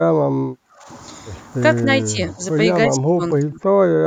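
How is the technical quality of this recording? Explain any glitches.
The recording's technical quality is undermined by four short stretches where the speech is abruptly pulled down in level.

Speech suppressed in double talk occurs at 0.26–0.88 s, 2.12–2.41 s, 2.95–3.22 s and 3.39–3.60 s. The voice drops or chops out there, by roughly 30 dB, 10 dB, 40 dB and 30 dB respectively. The likely cause is an echo canceller that cannot separate the talker from overlapping far-end echo and attenuates everything. A waveform shows sudden notches in the envelope, and a spectrogram shows the bands fading in those stretches.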